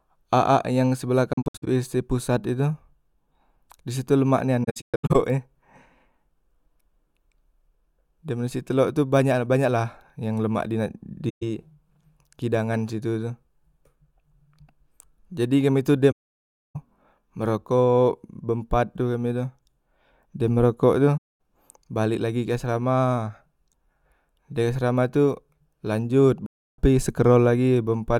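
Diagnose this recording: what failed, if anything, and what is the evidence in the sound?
The codec stage failed: AAC frame loss with muting. The speech drops out at 1.33–1.68, 4.63–5.16, 11.29–11.43, 16.11–16.76, 21.17–21.39 and 26.46–26.79 s. The first two gaps are broken into short holes, the longest around 70 ms and 150 ms. The 16.11 s gap is a solid 640 ms. The decoder zeroes each missing frame, and overlapping windows fade out and back in. A spectrogram shows blank full-band columns with tapered edges, and the waveform envelope ramps smoothly to silence. Gap lengths fit frames of about 21 ms.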